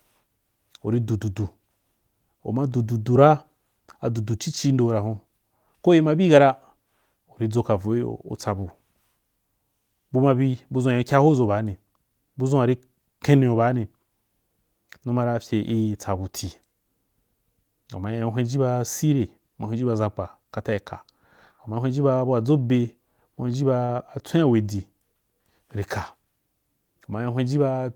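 At 23.85 to 23.91 s there is a short stall from a late packet. The jitter buffer ran dry, so the receiver held the last sound for about 33 ms and then resumed where it stopped. Nothing is lost, but playback now runs 33 ms later, and the held sound comes across as drawn out with a slight buzz or dip.

Right after, at 23.97 to 24.00 s, comes a short concealed packet loss. This time the audio never arrived. About 14 ms was filled with a continuation of the preceding sound, but 20 ms is simply gone. Unlike the stall, this is heard as a quick smear or wobble where a fragment drops out rather than lengthens.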